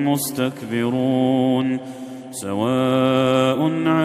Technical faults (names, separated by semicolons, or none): none